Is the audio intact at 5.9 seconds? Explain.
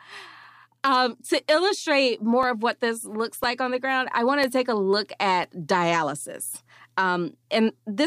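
No, not cleanly. The time falls inside a run of periodic USB or driver dropouts lasting from 0.44 to 7.43 s, in which a background task stalls the audio path once every second and roughly a millisecond of speech is replaced by silence each time. Each gap is heard as a regular tick, present only while there is signal. On a waveform each shows as a brief notch in the signal, and on a spectrogram as a thin vertical broadband line, evenly spaced at 1 s.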